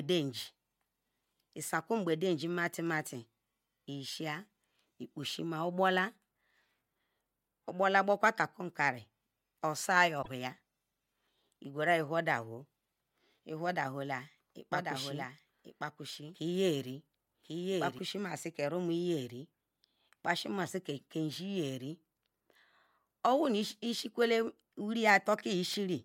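A speech recording with two faults. At 10.21 to 10.28 s the audio glitches and skips ahead, likely a broken MP3 bit reservoir, fitting 24 ms frames. From 14.73 to 17.99 s a doubled audio track appears: a copy about 5 dB quieter, lagging by roughly a second, visible as duplicated speech patterns with abrupt edges.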